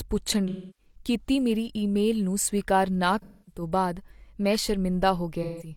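Speech with AAC frame loss with concealment three times: 0.48 to 0.95 s, before "ਕੀਤੀ ਮੇਰੀ ਈਮੇਲ ਨੂੰ"; 3.22 to 3.62 s, after "ਈਮੇਲ ਨੂੰ ਸਵੀਕਾਰ ਨਾ"; and 5.43 to 5.71 s. Coded audio was lost. The decoder refilled each gap from its last good spectrum. Those patches sound smeared and noisy.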